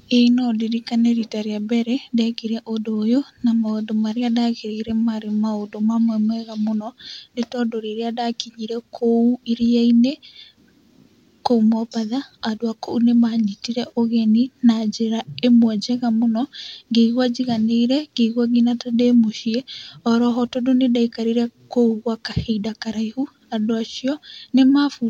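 No technical faults are audible.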